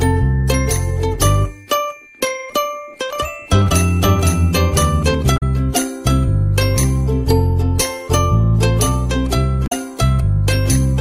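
From 3.13 to 5.15 s a second copy of the sound trails the first by about half a second, a few decibels quieter, full-band and dry, cutting in and out abruptly. This doubled audio track is likely an edit or slower capture path holding two copies out of step.

Brief glitches sit at 5.34 to 5.43 s and 9.64 to 9.73 s. They point to damaged data in a compressed stream, where the decoder misreads corrupted frames, loses sync and skips ahead to the next valid header.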